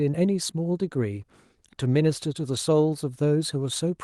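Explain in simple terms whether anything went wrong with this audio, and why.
Nothing went wrong with this recording: the speech signal is steady and intact throughout, with no technical problem anywhere in it.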